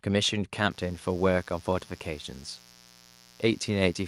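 Mains buzz enters this speech clip at 0.71 s and continues to the end: a steady, raspy drone sitting roughly 30 dB below the speech. It is built on 60 Hz, and its edge comes from sharp switching spikes, twice per mains cycle, leaking in from something like a dimmer, a rectifier or an unshielded cable. Those spikes spread harmonics of 60 Hz well up into the kilohertz range, which is why the buzz sounds rasping rather than like a smooth hum.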